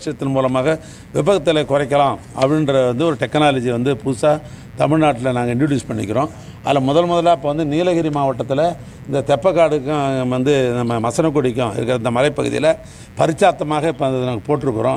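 Switching spikes from a 60 Hz supply leak into the signal path, laying a steady, raspy mains buzz about 30 dB below the audio throughout.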